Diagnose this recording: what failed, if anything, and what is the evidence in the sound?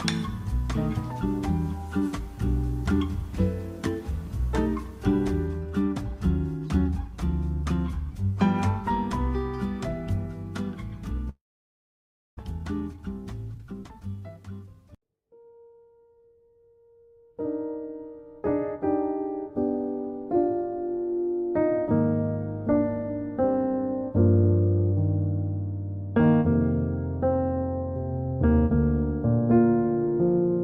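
Network stage, likely a long network dropout: from 11.29 to 12.41 s the sound decays into buzz, then silence, and returns skipped ahead by about 0.6 s, unlike a mute.

Network buffer, jitter buffer speed-up: 12.43–13.04 s runs 123% fast and 13.54–14.74 s 126%, trimming roughly 0.15 and 0.3 s. Pitch stays unchanged, ruling out a clock-rate error.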